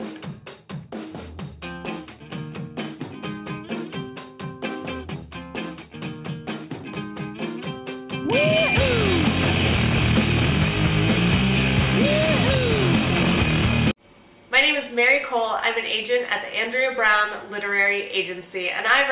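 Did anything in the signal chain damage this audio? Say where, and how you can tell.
No, nothing in the signal chain stood out as damaging this audio on listening.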